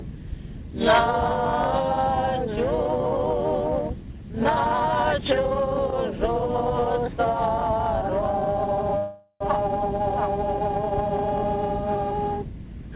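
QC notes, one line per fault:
6.80 to 6.84 s, short stall from a late packet: the sound is held about 16 ms too long, a brief smear while the jitter buffer waited, nothing lost.
8.98 to 9.42 s, call audio freeze: the last sound stretches into a fading buzz, then about 70 ms of silence, likely packets held up emptying the jitter buffer for 425 ms.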